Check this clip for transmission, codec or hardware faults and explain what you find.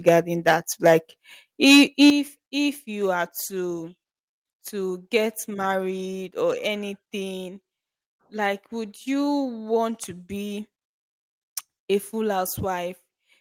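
Two related faults appear: microphone overload and the microphone volume being stepped down in response.

Microphone overload occurs from 0.07 to 0.09 s and again from 1.63 to 2.10 s. The input gain was likely set too high, driving the speech past the converter's ceiling by about 5 dB in the first burst and about 6 dB in the second, so the waveform tops are sliced flat. A fair share of samples are flattened in the brief first event and a smaller share across the longer second one. It sounds like a harsh, crackling edge on the loudest moments.

The microphone volume is stepped down at 0.09 s, 1.08 s and 2.10 s, by about 3 dB, 4 dB and 10 dB respectively. The call software likely detected the overloaded input and cut the device gain in single jumps, twice right after a clipped passage. Each step lowers the speech and the background together at once rather than fading, so the level visibly drops, most sharply after the 2.10 s cut.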